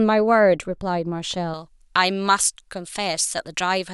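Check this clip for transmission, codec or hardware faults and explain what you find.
One fault: pre-emphasis left on, from 1.54 s to the end of the speech. Partway through, the voice suddenly turns thin, bright and hissy, with sibilants pushed forward and the body of the sound thinned out. The treble was boosted before recording or transmission, following a J.17-style curve, but the matching de-emphasis cut was never applied on playback. High frequencies sit about 11 dB above their proper level at 10 kHz relative to 1 kHz.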